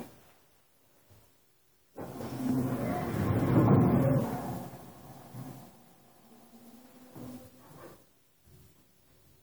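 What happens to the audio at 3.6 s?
At 3.59 s there's a quick blip from damaged data in the compressed stream. A bit of the encoded data was corrupted, so the decoder misread those frames, lost sync, and had to hunt for the next good frame header to recover.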